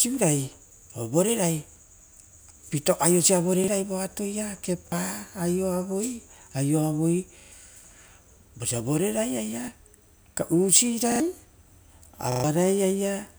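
Repeated buffer faults occur at 1.72, 3.64, 4.88, 7.4, 9.64, 11.12 and 12.32 s. Fresh audio arrived late, so the last block, consistent with a 40 ms buffer, replayed. Most give a single brief stutter. At 7.4, 11.12 and 12.32 s it repeats two or three times, skipping up to a tenth of a second of speech.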